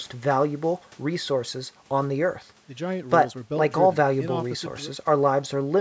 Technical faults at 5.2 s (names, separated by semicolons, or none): none